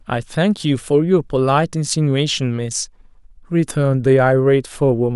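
A short speech recording with nothing technically wrong in it. No fault can be heard at any point in the clip.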